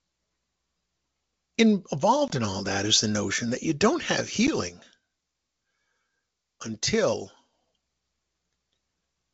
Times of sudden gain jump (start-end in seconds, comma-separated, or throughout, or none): 4.69-7.53